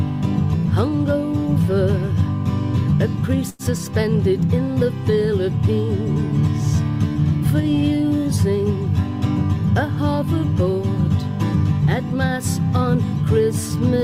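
At 3.49 s a sound hangs on for roughly a tenth of a second, from 3.49 to 3.62 s, with a slight buzz or dip before the audio carries on. That is a short stall from a late packet: the jitter buffer ran dry, the receiver stretched the last sound across 96 ms, and playback then resumed without skipping anything.

From 9.75 to 10.24 s the audio briefly sounds hurried, running about 5 percent fast while the pitch stays put. This is a jitter buffer speed-up: with too much audio queued, the receiver repeatedly cut out short pitch-period slices, about 40 ms in total, to bring the delay down.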